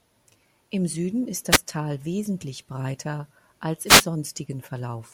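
A wireless microphone noise hit occurs at 1.50 to 1.58 s and again at 3.85 to 4.06 s, just after "wesentlich breiter als". Each is a brief swish of static: the analogue FM radio link faded as reflected signals cancelled at the receiver, so its noise rose over the speech. The first burst lasts under a tenth of a second; the second, about 0.2 s, is longer.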